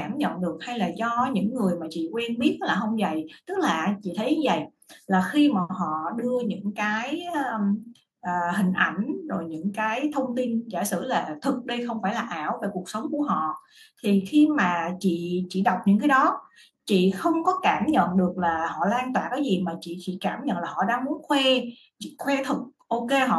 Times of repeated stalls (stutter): none

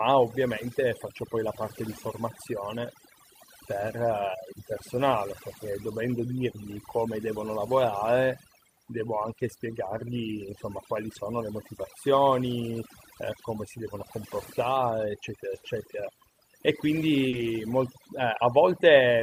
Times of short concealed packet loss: 15.59-15.63, 17.29-17.35

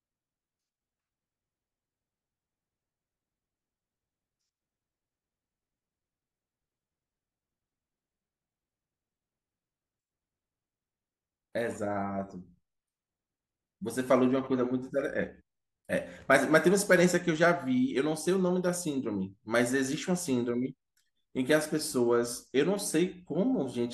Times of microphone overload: none

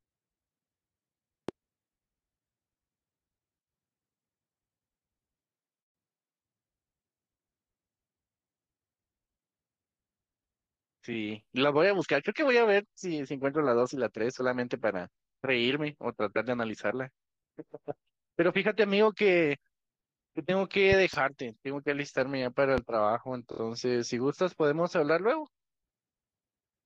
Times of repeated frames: 23.51-23.59

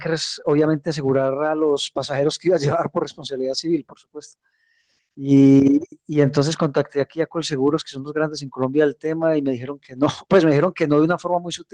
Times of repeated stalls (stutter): none

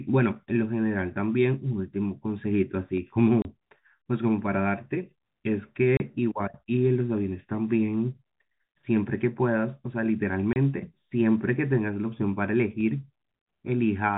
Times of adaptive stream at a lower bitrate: none

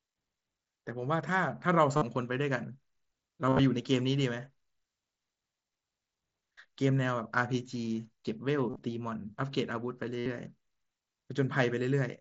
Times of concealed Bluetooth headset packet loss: 1.97-2.02, 3.47-3.59, 8.70-8.82, 10.19-10.26

